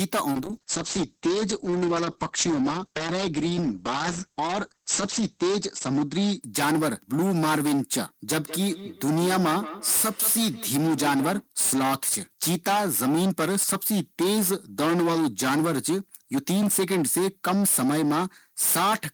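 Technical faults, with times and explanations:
Throughout, hard clipping: the level is driven about 22 dB past what the chain can pass, so something like a third of the samples get sliced flat at the ceiling. Those squared-off tops throw harmonics way up the spectrum, which is why the speech never sounds clean. Every loud syllable carries a harsh, buzzy fuzz, not just the odd crackle, because the overload is this heavy and hits this much of the signal.
0.33 to 6.97 s, call bitrate drop: the encoder gets squeezed from 40 kbps down to 9 kbps and sits at the bottom for about 5.08 s. With that few bits Opus codes everything much more coarsely, and it also narrows the band from 20 kHz to 8 kHz. You hear the speech go muffled and a bit watery and rough. Once the rate climbs back, the top end and detail return.
8.39 to 11.49 s, feedback echo between two devices: a second device in the same room is playing the call back into the other one's mic. 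That device's echo canceller only knows about its own output, so this copy gets through. The speech comes round again roughly every fifth of a second, peaking about 13 dB under the direct sound, and each pass is thinner and more ringy than the one before.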